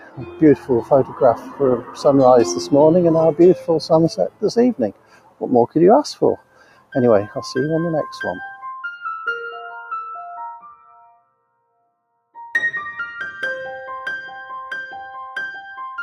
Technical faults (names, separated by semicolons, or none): noise suppressor applied to music or sounds; sound cut by the noise suppressor